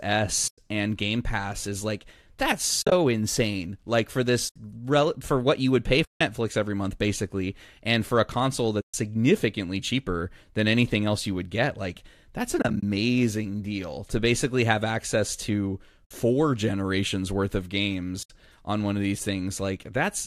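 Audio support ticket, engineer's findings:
AAC frame loss with muting: soft-edged holes at 0.48, 2.82, 4.49, 6.05, 8.81, 12.59, 16.05 and 18.23 s, 60 to 160 ms each. Longest is after "what you would pay". At 2.82 and 12.59 s the holes are broken into short scattered gaps. The decoder zeroed lost frames, and the overlapping windows fade the sound out and back in. The hole sizes fit 10 ms frames, likely a low-delay AAC-ELD stream.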